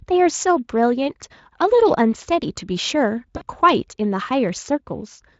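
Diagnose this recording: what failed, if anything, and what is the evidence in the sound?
Network stage: packets were dropped, and the Speex decoder hid the gap with VoIP packet loss concealment. From 3.37 to 3.44 s the speech smears into a fading continuation of its last pitch and filter shape, which fits about 40 ms of lost frames.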